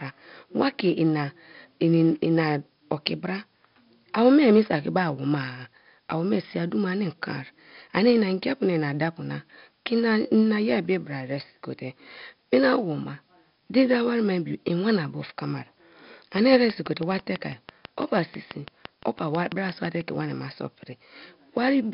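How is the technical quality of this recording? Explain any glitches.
The recording is technically poor, with heavy 4-bit ADPCM compression throughout and a burst of regular clicking near the end.

4-bit ADPCM compression, throughout: each sample is coded as a coarse 4-bit step from a predicted value, so the error rides along with the speech as gritty hiss and smears sharp onsets. Nothing survives above 5.3 kHz, dulling the sound, and the damage points to a rate around 44 kbps.

Train of clicks, 16.38 to 20.02 s: about twenty near-identical pulses arrive at a steady 6.06 per second, peaking roughly 10 dB above the speech and ticking through pauses as well. The regular pacing suggests a likely cause in electrical interference or a faulty connection or power supply.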